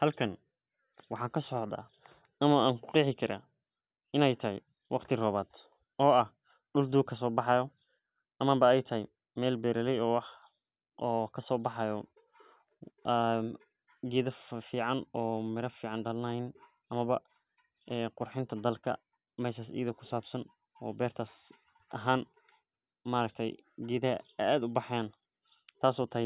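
Nothing in this speech recording gives away a technical fault at any point, so there's nothing here to track down.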